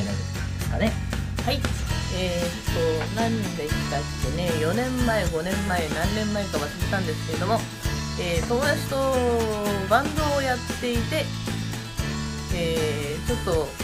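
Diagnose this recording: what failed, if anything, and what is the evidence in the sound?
Nothing failed, and nothing in the sound points to a fault at any stage.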